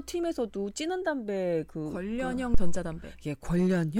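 At 2.54 s a phantom power thump hits the speech and lasts until about 2.87 s. A supply voltage was switched on or off on the live input, and that sudden step passed through the coupling capacitors as a low-frequency pulse. It sounds like a deep, dull thud under the speech. It peaks at about -11 dBFS. The thump dies away quickly, with a decay of about 72 ms.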